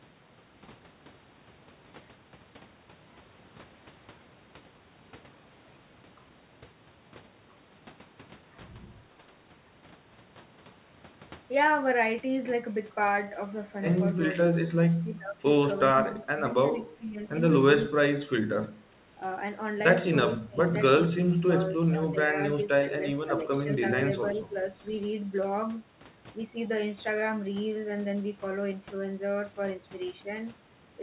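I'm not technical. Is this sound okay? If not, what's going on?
No. From 14.66 to 15.43, 15.91 to 17.19, 17.93 to 18.49, 18.91 to 18.98, 20.31 to 20.75, 21.16 to 23.66 and 24.34 to 24.59 s, the voice dips or drops out. This is likely speech suppressed in double talk: the call's echo canceller turned everything down while both sides spoke. From 24.28 to 24.45 s, a faint copy of the voice returns about 375 ms late. That is likely an echo leak from a loudspeaker the canceller didn't fully clean.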